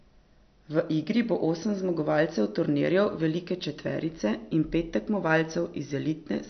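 Throughout, the speech sounds watery and swirly with nothing above 6.1 kHz, likely MP3 compression; the sound fits a bitrate near 48 kbps.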